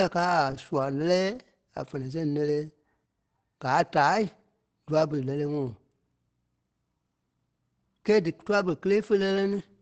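Throughout, the speech sounds muffled and hoarse, with highs stopping near 8 kHz: likely Opus compression in its SILK speech mode, fitting about 16 kbps.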